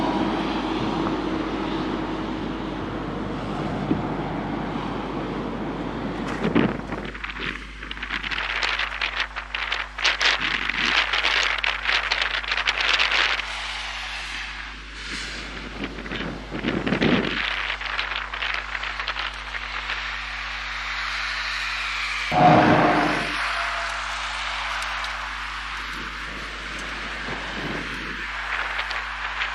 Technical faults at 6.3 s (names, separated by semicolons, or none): mains hum